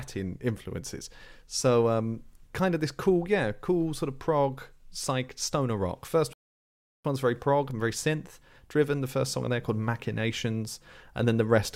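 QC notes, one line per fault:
6.33–7.05 s, rebuffering stall: the speech drops to silence for 712 ms, then picks up exactly where it stopped. The player ran dry waiting for data, so nothing is lost.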